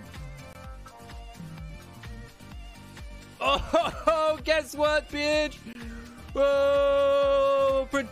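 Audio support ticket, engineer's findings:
CD scratch ticks, 3.79 to 4.08 s. Probable component: disc surface and player error correction. A scratch or blemish wipes out more data per rotation than the correction can rebuild, so the player patches or mutes the damaged samples. Result: three brief ticks, each well under a millisecond, spaced roughly a seventh of a second apart, one per disc turn as the damaged spot passes the laser.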